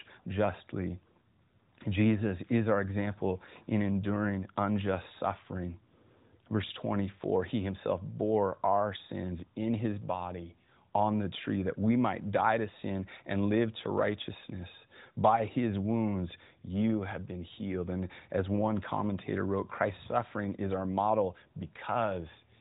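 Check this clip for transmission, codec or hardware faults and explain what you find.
No faults turn up anywhere in this recording.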